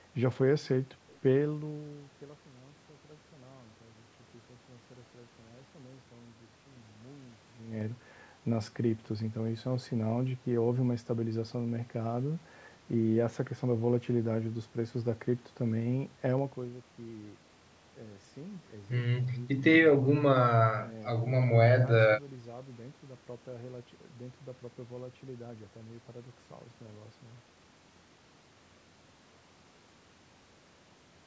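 Zipper noise at 7.47–7.85 s and 16.34–16.77 s in this speech: unsmoothed gain jumps of 3 dB, then 2 dB, about twenty a second, each ticking audibly.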